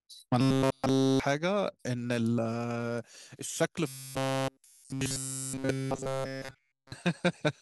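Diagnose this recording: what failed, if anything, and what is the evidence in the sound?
At the driver or buffer stage, robotic sound from repeated short buffers appears at 0.41 to 1.20 s and 3.88 to 6.92 s. Speech collapses into a fixed 134 Hz metallic buzz, likely a 7.5 ms chunk looping in place of nearly all new audio. Unlike a pitch shift, that buzz never follows the voice's own pitch.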